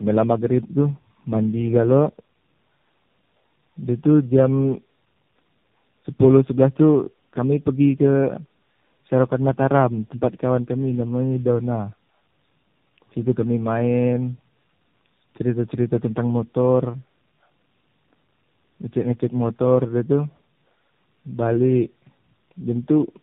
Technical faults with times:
0.00-23.22 tandem speech coding

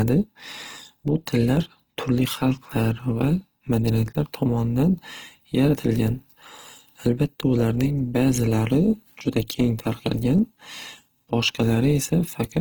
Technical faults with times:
0.00-12.61 Opus compression

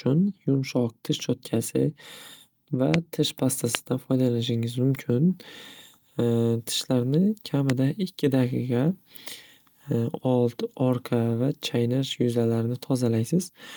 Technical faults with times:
2.94-2.96 loud pop
3.75-3.77 loud pop
7.70-7.72 loud pop

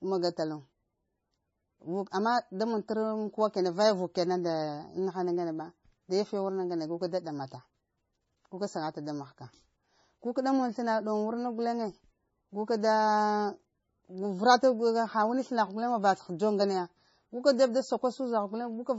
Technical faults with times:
0.00-18.98 MP3 compression

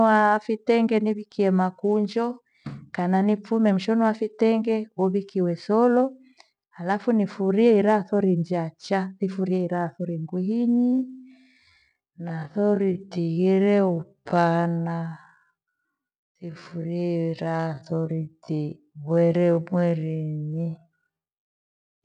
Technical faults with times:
10.67-22.04 time-stretched section

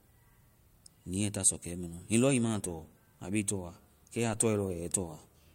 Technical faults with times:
4.33 DC step

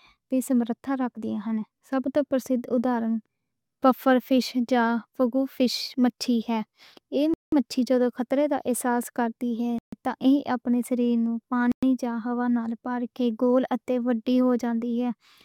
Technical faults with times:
7.34-7.52 Bluetooth stall
9.78-9.93 Bluetooth stall
11.72-11.83 Bluetooth stall

